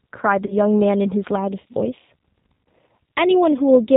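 From the start, the speech carries the sound of the G.729 codec, most likely its G.729A form. The signal has been rebuilt from a short vocal tract filter, a pitch predictor and a handful of pulses per frame, which points to an 8 kbit/s stream. The damage is plainly audible as a rough, slightly synthetic edge on the voice. On a spectrogram, energy stops sharply at 4 kHz. The harmonics also look smeared and grainy rather than cleanly striated.

Between 0.46 and 0.54 s, VoIP packet loss concealed by the speech codec interrupts the speech. About 30 ms of audio went missing, which fits a single lost packet. The decoder filled the gap by repeating its last pitch and filter with falling gain, so the sound turns briefly buzzy and fades. It stays weak for a moment after real data returns. The waveform shows a repetitive, shrinking periodic stretch there. The spectrogram shows frozen, evenly spaced harmonics that dim.

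From 1.36 s to the end, channel delay (comb filtering) makes the voice hollow and phasey. One channel lags the other by roughly a third of a millisecond, and summing them cancels shared content at regular frequencies. The first notch falls near 1.5 kHz, with further notches at roughly 3 kHz intervals above it. A spectrogram shows steady horizontal dark bands across the speech from that point onward.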